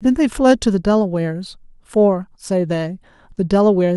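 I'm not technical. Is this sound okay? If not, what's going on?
Yes, nothing stood out as a problem when listening to this clip.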